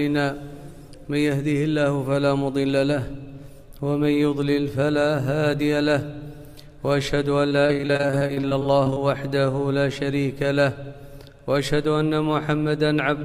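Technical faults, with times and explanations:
7.49–8.99 s, repeated packet loss (robotic sound): short dropouts of up to 23 ms recur rapidly, each patched by repeating the preceding sound, so about a quarter of this stretch is synthetic fill. The waveform shows repeated, copied segments; the spectrogram shows smeared, comb-like harmonic striping.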